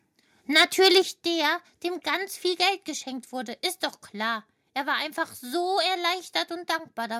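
From 0.56 to 0.99 s the microphone input was likely set too high, driving peaks about 7 dB past the converter's limit. This microphone overload flattens their tops, giving the loudest speech a harsh, crackling edge. At 1.02 s the call software likely reacted by lowering the device's input gain in one step, by about 6 dB. The microphone volume stepping down makes voice and background drop abruptly together.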